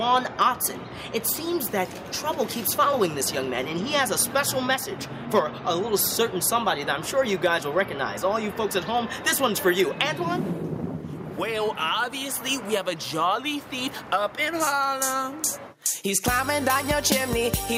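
No technical faults can be heard anywhere in the recording.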